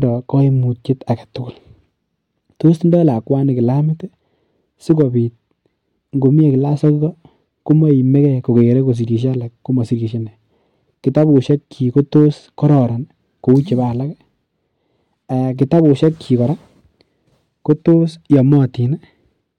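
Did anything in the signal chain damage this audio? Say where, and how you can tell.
Yes, there's hard clipping running through the whole speech clip. The signal was driven about 3 dB past what a stage could pass, most likely the converter or a sample-format conversion, so the loudest peaks got sliced flat. Only a small fraction of samples, around half a percent, go over, which is why you hear it as brief crackle on the louder syllables rather than constant fuzz. Those flat tops spray harmonics high up the spectrum.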